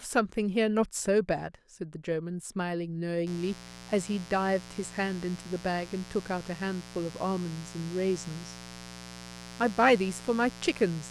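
From 3.27 s to the end there's a mains buzz at 60 Hz, sitting roughly 15 dB under the speech. Sharp switching spikes, twice per mains cycle, leak in from something like a dimmer or an unshielded line, stacking harmonics into that raspy, steady rasp.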